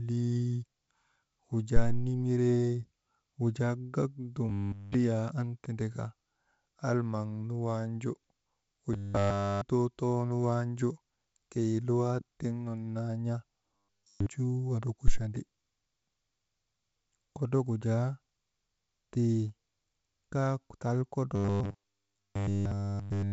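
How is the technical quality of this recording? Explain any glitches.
The speech, carried over a wideband telephone path with nothing above about 7.7 kHz, is interrupted four times by robotic sound from repeated short buffers: 4.49–4.94 s (after "wujaa gak"), 8.93–9.61 s, 13.76–14.26 s (after "tiŋ nun naa n̰a"), and from 21.36 s to the end. The likely cause is audio arriving too seldom, so a 10 ms slice repeats and virtually all real sound is skipped. This produces a rigid 100 Hz metallic buzz. On a spectrogram it shows as flat stripes at multiples of 100 Hz, and on a waveform as identical 10 ms cycles.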